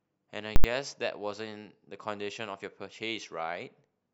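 At 0.56 s the speech is cut by invalid numbers at full scale. A calculation produced infinite or invalid values that pinned the output to one extreme value for 80 ms, until 0.64 s. The jumps in and out give two loud pops with no sound between.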